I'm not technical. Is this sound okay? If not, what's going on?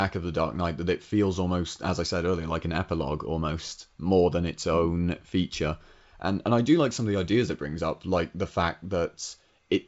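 Yes, this speech comes through a wideband phone connection working as intended, which keeps the sound clear up to about 7.7 kHz, a bit fuller than an ordinary phone call, with no problems to point out.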